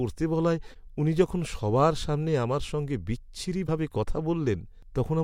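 A speech clip with damaged data in a compressed stream at two points: 0.71–0.76 s, just before "উনি যখন সবার সামনে", and 3.64–3.69 s. Each is a brief glitch of about 50 ms where corrupted bytes make the decoder misread frames and lose sync until it finds the next frame header. On a spectrogram each appears as a short smeared or blocky burst breaking the speech harmonics, and in the waveform as an abrupt discontinuity.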